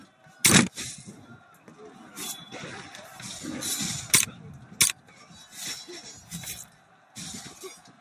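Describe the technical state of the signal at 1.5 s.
A speech-tuned noise suppressor is running on non-speech audio, treating steady tones and decaying tails as noise. Its gain keeps swinging by roughly 10 dB, so sustained parts sink while attacks pass, giving a pumping, fluttering, thinned-out character around 1.5 s.

At 1.5 s the signal sits inside a stretch, 1.39 to 1.74 s, where the same suppressor cut this sound harder than the rest. The gain dips by up to about 6 dB, so the sound sags and its decay is clipped short for roughly four tenths of a second.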